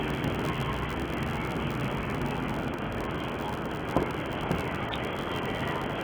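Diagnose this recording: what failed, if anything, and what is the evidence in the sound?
The codec stage has failed. Throughout the clip the sound is dull and smeared. The texture warbles and fizzes where energy is sustained. This is likely AAC compression, heavy AAC-LC damage at a very low rate, around 16 kbps. At that rate the encoder lowers its cut-off and quantises the frequency lines coarsely against its hearing model. Parts of the spectrum are left empty or filled with substitute noise.

A buffer handoff also fails, a block size mismatch (padded). A steady buzz at 86.1 Hz runs through the whole clip. That is the block rate, which fits a 512-sample read buffer. The writing stage supplies shorter blocks, and the remainder of each block is zero-filled. Each block therefore carries a short gap. The audio plays at 0.861 times normal speed, stretched in time but at about its normal pitch.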